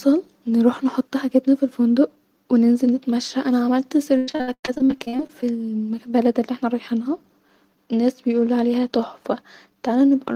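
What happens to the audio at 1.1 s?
Nothing goes wrong at 1.1 s; the speech there plays through intact, with no dropout, click or distortion.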